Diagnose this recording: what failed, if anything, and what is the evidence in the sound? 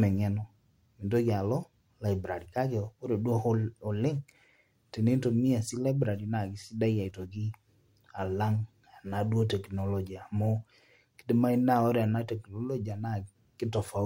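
Nothing failed in this speech recording, and no stage of the chain leaves an audible trace. There is no evidence in the sound that points to a fault anywhere from capture to playback.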